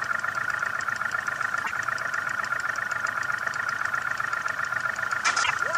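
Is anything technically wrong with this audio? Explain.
Yes. Damaged data in a compressed stream at 1.61 to 1.72 s and 5.40 to 5.51 s: corrupted bytes make the decoder lose frame sync and resync, leaving brief chirps or blips.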